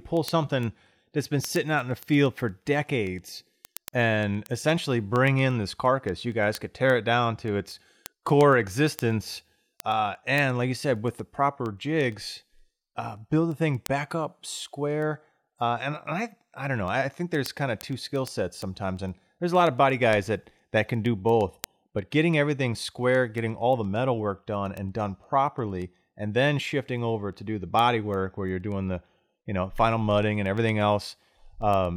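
From 0.17 s to the end, word clock ticks run through the speech about ten times a second: the receiving device's clock drifts roughly 200 ppm from the sender's, slipping one sample per tick. Each shows as a thin full-height vertical line on a spectrogram and a brief spike in the waveform.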